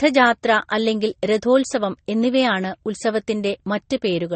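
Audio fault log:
Throughout, transcoding between lossy codecs: the speech was likely encoded at a low bitrate, decoded, and encoded again with a second lossy codec, in a pattern that points to MP3 near 32 kbit/s followed by Vorbis near 35 kbit/s. The second encoder spends its few bits reproducing the first one's artefacts, then adds its own, so two layers of artefacts sit together, and nothing remains above 8.4 kHz, leaving the speech dull.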